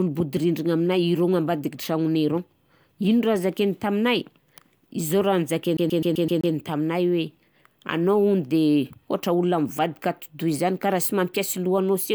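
From 5.77 to 6.54 s the speech hits a CD stuck on one turn. The player's laser is thrown back one track at the same point on each rotation, so a single 128 ms slice of audio repeats six times in a row, with a brief mute at each jump back. The result is a fast, evenly spaced stutter lasting about three quarters of a second before playback moves on.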